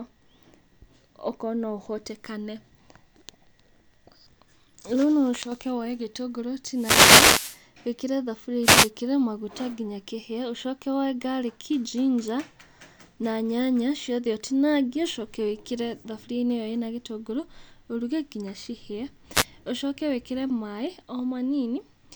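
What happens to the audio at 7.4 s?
At 7.4 s the speech is hit by a wireless microphone noise hit from 6.72 to 7.62 s: the analogue FM radio link fades, so receiver noise surges as a burst of static.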